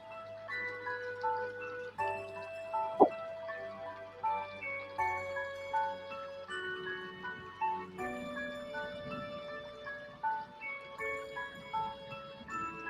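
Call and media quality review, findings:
Noise suppressor applied to music or sounds, whole clip. Speech-tuned suppressor left active; treats sustained tones, ambience and reverb as noise. Level swings around 5 dB as held content and tails are pulled down while onsets pass, giving pumping, fluttering or thinning.

Sound cut by the noise suppressor at 0.00–0.49 s, 3.98–4.23 s, 7.38–7.61 s, 10.08–10.23 s, 10.46–10.61 s, 10.81–10.96 s, 11.50–11.73 s, 11.95–12.50 s. Suppressor misclassified steady or decaying sound as noise; drops of about 4 to 8 dB, decays cut short.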